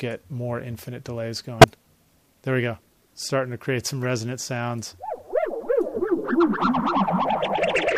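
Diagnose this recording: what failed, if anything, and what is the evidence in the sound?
Two short bursts, a loud one from 1.60 to 1.64 s and a much quieter one from 4.03 to 4.05 s, point to the codec stage: a corrupt frame decoded. Flipped bits in a couple of compressed frames each time misplaced energy across frequencies.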